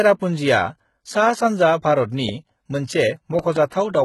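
HE-AAC compression runs through the whole clip, and the damage is heavy. The spectrum stops at about 11.8 kHz, and the treble below that edge sounds rebuilt rather than captured: the likely cause is an HE-AAC coder that kept only the lower bands and filled the top by copying them upward under a coarse envelope. Its harmonics fail to line up with the true ones, so sibilants come out gritty and metallic. The heaviness of the damage fits a very low bitrate, around 16 kbps.

A loud pop lands at 2.29 to 2.31 s, a single sharp click sitting roughly 10 dB above the speech, which carries on beneath it. It is likely a sudden voltage step or pulse entering the signal path, from a plug, a switch, static or a driver glitch, that the following circuits shaped into a brief burst.

Between 3.39 and 3.58 s, a second loud pop event arrives as two pops in quick succession, again roughly 10 dB above the speech. 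It likely has the same kind of origin: an electrical transient added on top of the audio rather than replacing it.

Pre-echo follows at 3.69 to 3.72 s. A short hiss spreads about 23 ms ahead of a sharp attack, blurring its onset. The transform codec spread the quantisation noise meant for the loud attack across its whole block, so the quiet moment just before the attack is filled with that noise.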